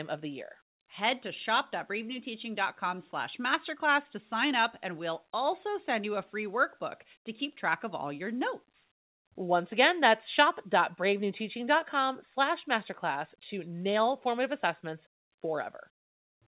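No technical faults can be heard anywhere in the recording. The speech comes through a working call path with nothing above 4 kHz, a narrowband, telephone-like sound that fits a G.711 mu-law codec at 64 kbps.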